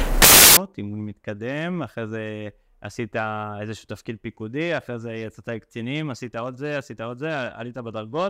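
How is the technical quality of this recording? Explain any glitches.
There is one glitch, right at the start. From 0.0 to 0.57 s the samples are built from the wrong bytes: each value is assembled with its bytes misaligned or swapped, so the rapidly changing low bits dominate. The result is a burst of loud, harsh broadband noise, unlike a dropout or click, which stays quiet or momentary.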